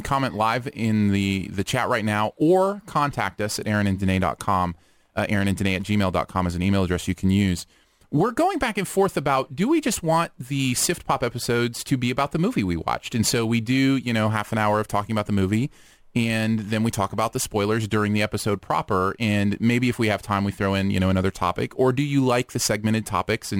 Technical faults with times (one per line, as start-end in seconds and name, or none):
0.00-23.59 crude rate conversion